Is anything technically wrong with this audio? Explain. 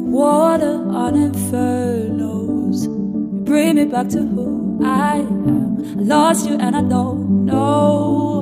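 Yes. From 2.23 to 7.31 s the sound turns rushed at about 1.54 times the pace, pitch unchanged: likely a time-stretched section, shortened by dropping small slices.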